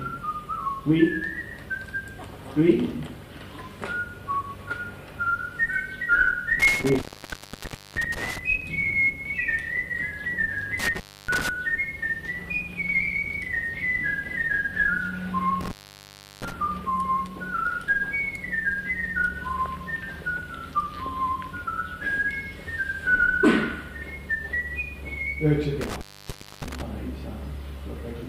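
The sound drops out with crackle at each edge and faint hiss in the gap at 6.60–8.38 s (open about 0.95 s), 10.79–11.49 s (0.29 s), 15.61–16.52 s (0.71 s) and 25.81–26.82 s (0.61 s). This is intermittent contact: a loose cable or plug briefly breaking the signal path.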